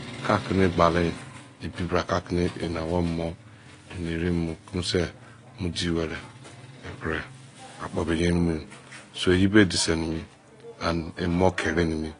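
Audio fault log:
Throughout, AAC compression: dull, smeared speech with nothing above 10 kHz and a fizzy warble on sibilants, likely from a low bitrate around 32 kbps.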